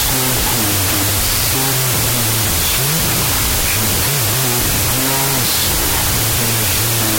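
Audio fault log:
throughout, wrong sample width: harsh noise buries the sound, running at half speed and an octave low, which fits 32-bit float samples split into 16-bit integers.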